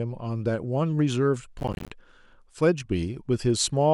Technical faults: processor overload crackle

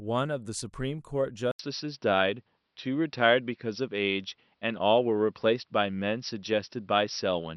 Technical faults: input switched to a poorer device

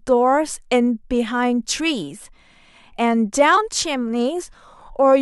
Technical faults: none

